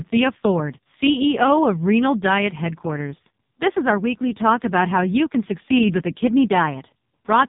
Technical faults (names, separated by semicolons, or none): AMR narrowband mobile codec